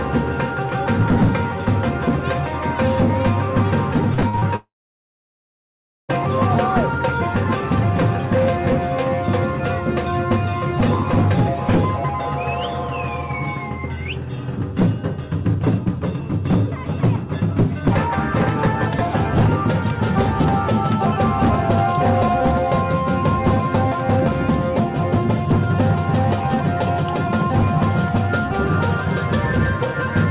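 Repeated packet loss (robotic sound) runs from 4.14 to 4.44 s. Over about 0.3 s there are five short holes, the longest 46 ms. Each is bridged by stretching the sound that came just before it, and the next hole arrives before the audio can settle. Just over half of this span is patched rather than real, so it sounds choppy, with small pieces clipped out. The band stops at 4 kHz throughout, which fits a G.711 A-law call path at 64 kbps.

A long network dropout follows from 4.56 to 6.11 s, most likely a stretch where no audio packets reached the receiver. About 1.5 s of sound is lost. The gap opens with a brief buzz or hiss continuing the last sound that fades within about a tenth of a second, then dead silence for roughly 1.4 s. The audio returns at 6.11 s without the missing portion.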